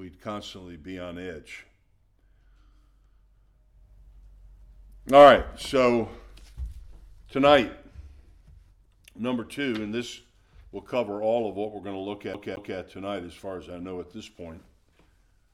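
At 12.34 s the audio starts to skip like a CD stuck on one turn. A scratch keeps sending the laser back one track. The same 0.22 s slice plays twice, with a brief mute at each jump. It ends at 12.78 s.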